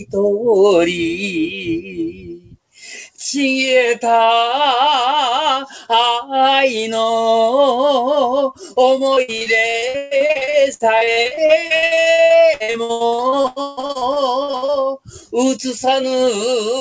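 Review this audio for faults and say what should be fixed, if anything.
The noise suppressor cut sound three times, at 0.00 to 0.16 s with a drop of about 11 dB, at 1.49 to 2.77 s with about 19 dB, and at 14.98 to 15.32 s with about 19 dB. In the middle span, roughly a second of sound sinks. The suppressor treated steady or decaying parts as background and pulled them down, which shortened tails while sharp onsets still got through. Unlike packet loss, nothing goes missing or turns metallic; the sound only becomes quieter. To prevent this, lower the suppression strength or raise its threshold so that sustained wanted sound is not classed as noise.

Repeated packet loss (robotic sound) runs from 9.14 to 14.81 s. Dozens of short holes follow one after another, the longest about 149 ms, and concealment fills roughly 39 percent of the stretch by extending the last fragment. This gives a choppy texture with pieces missing, limited at the top by the call path's cutoff at 8 kHz, which fits a wideband codec such as G.722. 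Unlike a suppressor cut, the content itself is replaced, not just lowered in level. To prevent this, fix the unstable network link and give the jitter buffer more headroom.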